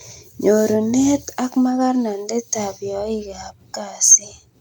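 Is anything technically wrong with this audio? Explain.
No, nothing technically wrong can be heard here.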